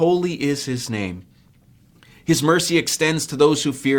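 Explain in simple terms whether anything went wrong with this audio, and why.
Something went wrong where two pieces of the stream were joined: an overlap between stream segments. Their time markings overlapped, so the player threw away a sliver of real sound. Just after "is his name", at 1.49 s, this causes a tiny click or skip.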